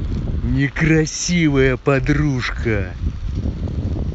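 No technical faults can be heard in this speech clip.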